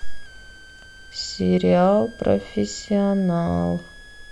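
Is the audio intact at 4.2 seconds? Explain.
No. A switching supply whistle runs through the whole clip, including 4.2 s. A power supply switching in an audible burst mode or beating with another supply leaks a high tone into the speech. It wanders between 1.5 and 1.7 kHz, roughly 25 dB below the speech.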